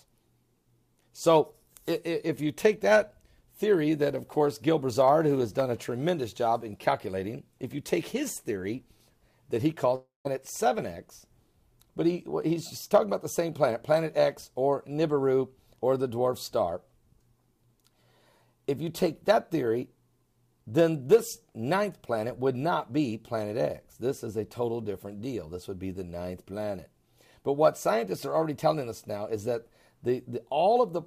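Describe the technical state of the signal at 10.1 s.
At 10.1 s, a long network dropout (9.95–10.27 s): the last sound smears into a fading buzz, then 160 ms of flat silence on the waveform, likely from lost packets.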